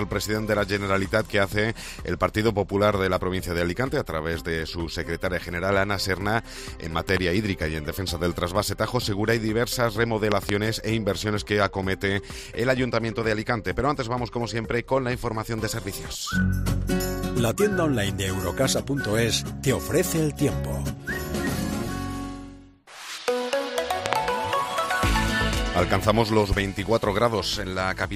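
A sudden voltage step, likely from a connector, switch or static discharge, enters the signal path three times, producing a loud pop each time. Every event is a double pop riding over the sound, which continues beneath it: at 7.09 to 7.19 s, peaking about 15 dB above the signal; at 10.32 to 10.51 s, about 20 dB above; and at 24.06 to 24.15 s, the harshest at about 25 dB above.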